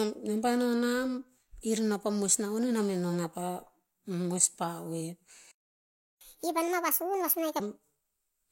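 A speech recording with a playback stall from 5.51 to 6.21 s: the audio cuts out mid-flow and stays silent for about 695 ms. This is likely the player running out of buffered data or its playback thread being blocked until it recovered. Immediately afterwards, from 6.21 to 7.60 s, comes catch-up at higher speed. The player works through its backlog by resampling at 1.5x, so speed and pitch rise together, the pitch by roughly seven semitones, before dropping back to normal rate at 7.60 s.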